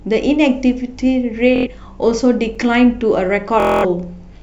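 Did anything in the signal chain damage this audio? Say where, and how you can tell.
Yes. Bluetooth stutter on the wireless link at 1.56–1.67 s and 3.60–3.85 s: the receiver replays a short slice as a buzz while packets are missing, then the speech jumps ahead.

A block of digital silence at 2.55 s: a 5 ms dropout, short enough to be heard as a tick or dip, where the driver or buffer stage output zeros instead of samples.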